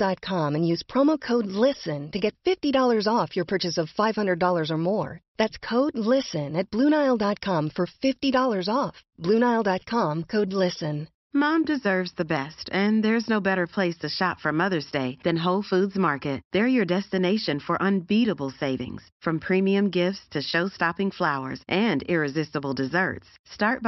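No technical faults are audible anywhere in the speech.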